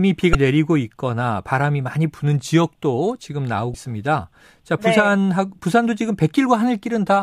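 At 0.32 to 0.35 s and again at 3.71 to 3.75 s, the speech breaks briefly. Both are damaged data in a compressed stream. Corrupted bytes garble the decoder's frames there, and it loses sync. Each disruption lasts about 34 ms.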